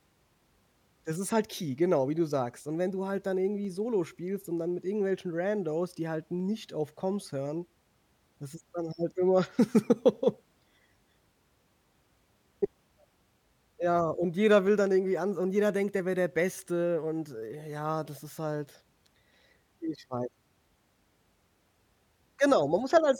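Clock drift buffer slips recur from 0.89 s to 22.9 s, roughly ten brief clicks spaced 2.76 s apart through the speech. The likely cause is two clocks disagreeing by something like 70 ppm, so the buffer between them periodically drops or repeats a handful of samples.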